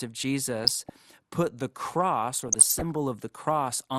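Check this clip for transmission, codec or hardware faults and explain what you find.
There are two problems here: a codec that's starved of bits across the whole clip, and two bursts of reception damage on top of it.

MP2 compression is audible from start to finish, and the likely culprit is MPEG Layer II at a low rate; the dullness fits something around 80 kbps. With that few bits to share across its 32 sub-bands, the encoder drops the top bands entirely and quantises the rest coarsely. So the speech is muffled and the highs are gone, with a grainy, gurgling texture riding on everything.

DAB burbling hits twice, from 0.63 to 0.90 s, just before "put the", and again from 2.36 to 2.95 s. That's bit errors slipping past error correction into the MP2 stream. Corrupted samples put short blips of noise into single sub-bands, and corrupted scale factors make sub-bands lurch in level for up to a frame. 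The first burst is lighter, consistent with a fairly low error rate over about a dozen frames. The second is longer and messier, suggesting roughly double the error rate spread over around two dozen frames.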